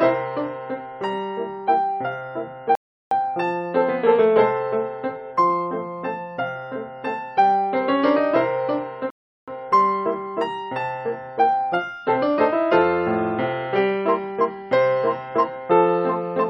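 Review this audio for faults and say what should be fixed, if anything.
Two rebuffering stalls interrupt playback, from 2.75 to 3.11 s and from 9.10 to 9.48 s, adding 0.36 s and 0.37 s. Each time, the player drained its downloaded audio and halted until more data arrived, then resumed at the exact point it stopped, so nothing is skipped. On a waveform each shows as a flat, empty gap; a spectrogram shows a clean vertical band of silence. A larger playback buffer or adaptive bitrate switching would prevent these stalls.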